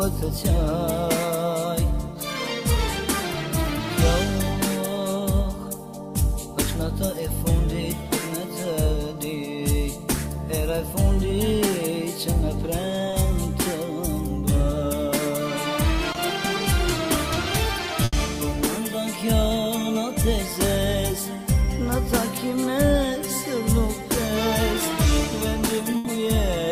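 At 13.11 to 13.15 s and again at 16.13 to 16.17 s, short concealed packet loss occurs. Roughly 20 ms of audio failed to reach the decoder in time. The receiver invented a stand-in by extending the preceding sound, pitched or noise-like to match it, and then crossfaded back to the real signal. Each gap is heard as a brief smear or wobble, and a very short sound falling in that 20 ms can drop out entirely.

At 18.05 to 18.15 s and again at 25.97 to 26.07 s, a burst of packet loss removes about 80 ms each time. Concealment stretches the last received sound across the hole while steadily lowering its level, so a tonal passage becomes a held, fading buzz and a noisy one a dwindling hiss. Playback then picks up later in the sound, with the intervening moment simply gone.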